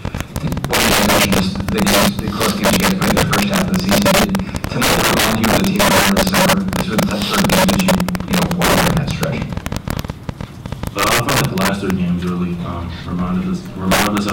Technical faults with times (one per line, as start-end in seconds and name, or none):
0.00-14.33 integer overflow
0.05-11.41 train of clicks